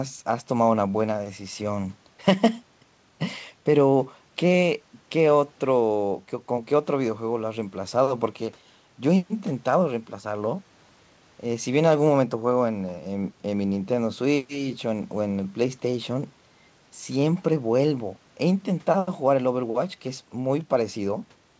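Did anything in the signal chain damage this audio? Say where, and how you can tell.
No, nothing in the chain damaged this speech; it came over a WebRTC call path working normally, and the absence of content above 8 kHz fits a G.722 wideband codec at 64 kbps.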